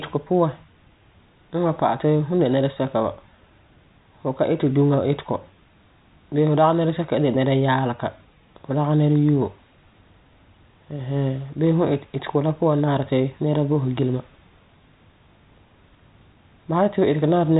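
No technical faults are audible.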